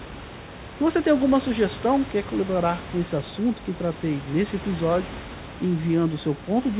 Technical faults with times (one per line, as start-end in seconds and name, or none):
none